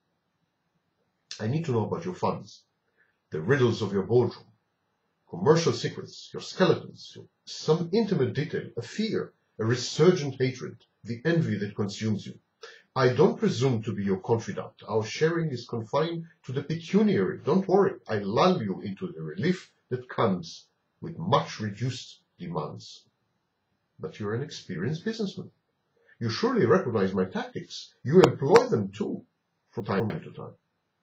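From 29.8 to 30.1 s, chunks out of order: a 100 ms chunk plays two chunks late, briefly jumbling the sound at its hard joins.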